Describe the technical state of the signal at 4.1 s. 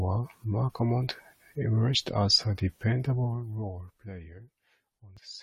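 A fine ticking zipper noise rides on the speech at 4.1 s, within a stretch from 3.10 to 4.42 s after "emerged as a". The level drops by around 20 dB in unsmoothed 2 dB steps, about ten a second, and each step clicks.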